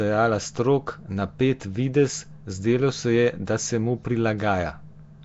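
A speech clip carrying Nellymoser compression from start to finish, plainly audible as a rough, hissy halo around the voice and a smeared, underwater blur. Nothing survives above about 7.7 kHz, and the damage fits a bitrate of around 32 kbps. The likely cause is the old Flash microphone codec, Nellymoser Asao: it gives no bits to weak bands and fills them with noise, so the grain sounds like hiss rather than the warbling, metallic swirl of a low-rate MP3.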